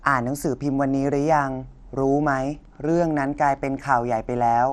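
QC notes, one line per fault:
Throughout, MP2 compression: the speech sounds dull and plainly gurgling, with a granular edge and nothing above 13.6 kHz. This is likely MPEG Layer II coding starved of bits, shutting off upper sub-bands and coarsely quantising the rest, consistent with roughly 64 kbps.
2.22–4.22 s, Wi-Fi interference: a faint, steady ticking sits well beneath the speech, repeating every 102.4 ms, about ten times a second. A nearby Wi-Fi radio's beacon bursts are being picked up and rectified by the audio circuit, turning each one into a click.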